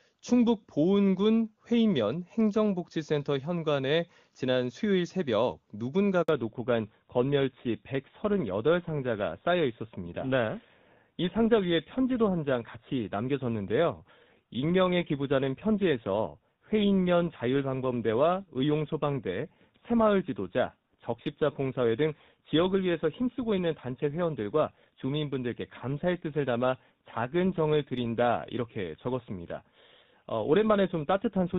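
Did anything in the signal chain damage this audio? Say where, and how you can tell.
Yes. At the network stage there is a handover gap from 6.23 to 6.29 s. The sound dies away within a few tens of milliseconds and stays silent for about 60 ms while the call switches links. On a waveform it shows as a flat, near-silent strip, and on a spectrogram as a short blank column across all frequencies.

From 6.29 s to the end, the codec stage shows a fallback to narrowband. Before that point the HD Voice path is clean, with energy reaching about 7 kHz. Afterwards everything above 4 kHz is gone, and the voice turns dull and rougher. The spectrogram shows a hard ceiling at 4 kHz, which fits a switch from AMR-WB to GSM full rate.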